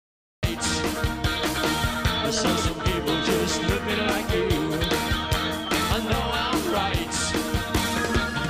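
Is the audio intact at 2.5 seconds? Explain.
No, at 2.47 s a peak overshoots the largest integer value and wraps to the opposite sign. This integer overflow produces a sharp, violent crack rather than clipping.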